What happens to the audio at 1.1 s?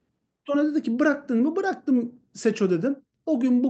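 Nothing goes wrong at 1.1 s: the speech comes through the Opus call path intact, with no dropout, click or distortion at that point.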